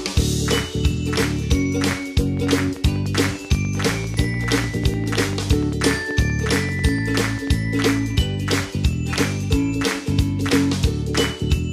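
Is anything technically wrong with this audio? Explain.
Yes. A train of clicks runs from 2.37 to 7.48 s: roughly 50 evenly spaced pulses at about 10.2 per second, likely from interference or a faulty connection or power supply, ticking about 5 dB above the sound.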